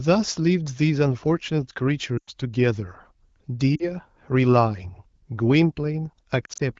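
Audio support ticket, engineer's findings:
Brief dropouts falling to near silence at 2.18–2.31 s, 3.75–3.89 s and 6.45–6.61 s; speech returns rough. Lost AMR speech frames: decoder concealment repeating last good parameters at falling gain, over the wideband codec.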